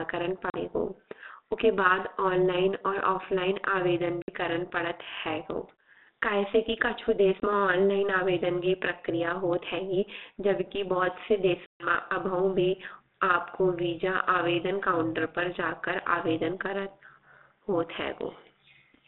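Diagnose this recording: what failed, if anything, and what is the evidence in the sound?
Overlap-add ripple sits in the call processing stage and runs through the whole speech clip. The level pumps up and down by about 11 dB at a rate of around 200 Hz. That gives a metallic buzz with extra tones around each note. The cause is frame-based processing. The audio was split into windowed frames and rebuilt with an overlap that does not add back to a steady gain. So each frame boundary leaves a dip.

Packet loss on an ADPCM call is a network fault. It shows as hard-edged silent holes at 0.50 to 0.57 s and at 4.22 to 4.31 s. The second hole falls between "ऑनलाइन और ऑफलाइन आवेदन" and "करन पडत". More holes follow at 7.40 to 7.54 s, between "कई से कि कछु" and "ऑनलाइन आवेदन की", and at 11.66 to 11.95 s. The lost audio is 40, 60, 20 and 140 ms, which fits 20 ms packets. After each gap the decoder's predictor and step size are out of step, so speech resumes slightly distorted. 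It settles within tens of milliseconds. Through all of this the narrow 250 Hz to 3.7 kHz telephone band carries the light grain of G.726 ADPCM, which fits 32 kbit/s.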